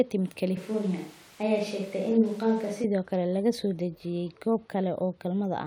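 A speech clip that turns roomy and hollow from 0.57 s to 2.84 s, with thinner bass and background noise at roughly 25 dB below the speech, while the overall level stays about the same. The change in and out is abrupt at both ends. This is a switch to a distant microphone, likely because the close microphone's signal dropped out and a mic further from the talker, picking up more of the room, covered that stretch before the close mic returned.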